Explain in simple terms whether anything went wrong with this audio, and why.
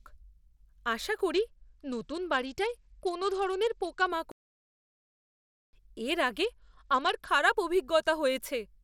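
Bluetooth SBC bit pool drop, from 1.33 to 4.10 s and again from 6.44 to 7.29 s: the wireless link got crowded, so the phone squeezed the speech into far fewer bits. The crisp top end vanishes and a gritty roughness creeps in until quality returns.

Playback stall, from 4.32 to 5.73 s: the speech cuts out completely for about 1.4 seconds, then carries on. The player likely ran short of audio data or was briefly held up, leaving nothing to play.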